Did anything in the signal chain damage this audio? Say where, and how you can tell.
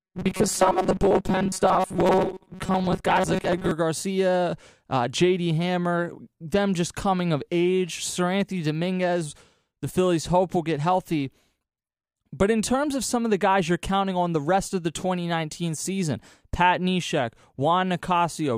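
Yes. Robotic sound from repeated short buffers runs from 0.01 to 3.71 s: the speech becomes a rigid, metallic buzz near 188 Hz. The likely cause is a starved driver buffer looping roughly 5 ms of audio, with about half the material repeated rather than new.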